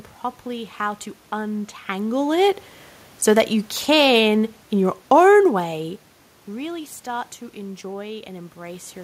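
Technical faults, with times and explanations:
3.23 to 5.94 s, automatic gain falling: over these 2.7 seconds the level of the speech eases down by about 5 dB, and the room noise underneath sinks by the same amount. This happens because the automatic gain control judged the input too loud or too noisy and pulled its gain back gradually rather than in one step. Because voice and background fall together, this is a gain change in the chain, unlike the level shifts around 1.5 s and 6 s, which come from the talker moving relative to the microphone.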